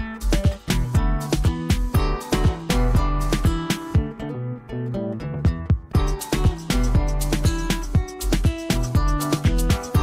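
Nothing technical stands out here; the audio just runs along without any glitches or problems you'd need to worry about.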